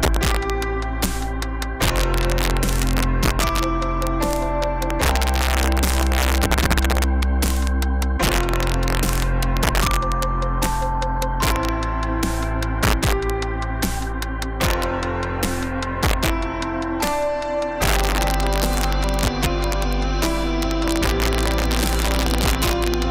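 Right through the clip there's integer overflow: the level runs about 2 dB too hot, and on the loudest peaks, well under one percent of samples, the values wrap to the opposite sign instead of being limited, giving sharp, violent cracks far harsher than clipping.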